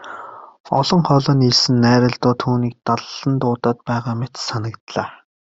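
No technical faults can be heard in this recording.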